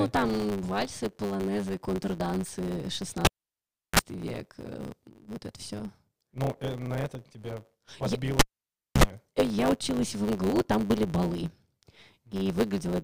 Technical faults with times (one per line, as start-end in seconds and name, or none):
0.00-13.03 block size mismatch (truncated)
3.25-3.99 cable pulled and plugged in
8.39-9.03 cable pulled and plugged in